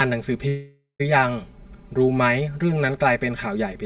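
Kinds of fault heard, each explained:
Channel delay (comb filtering): One channel runs around 5 ms behind the other, and when the two are summed to mono the shared content cancels at regularly spaced frequencies, the first notch sitting near 100 Hz and the rest repeating up the band. Across the whole clip this gives the speech a hollow, phasey colour, with the same fixed notches present throughout the narrowband call audio, which stops around 4 kHz.
Long network dropout: From 0.48 s to 1.01 s the speech breaks off. The last sound is stretched into a continuation lasting roughly half a second that fades away, leaving about 140 ms of near-silence before speech resumes. About 520 ms of the original audio is gone, so the sentence picks up further along rather than where it stopped. The likely cause is a long stretch of lost packets with the receiver concealing the gap.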